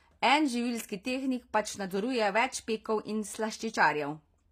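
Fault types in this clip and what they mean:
HE-AAC compression: The treble in this speech is rebuilt from copied lower bands rather than coded directly, so s sounds come out gritty and metallic with the damage plainly audible. Nothing reaches above 15.5 kHz, consistent with a likely low-bitrate HE-AAC v2 encode near 24 kbps.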